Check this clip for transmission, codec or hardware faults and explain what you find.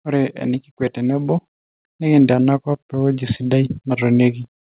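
One fault is present: automatic gain rising. From 0.05 to 4.39 s the gain control, judging the input too quiet, lifts level by about 9 dB, so voice and background swell together. On the waveform the envelope widens steadily across the clip, and the spectrogram brightens uniformly. The call path's band limit is also audible, with nothing above 4 kHz, which fits G.711 narrowband coding.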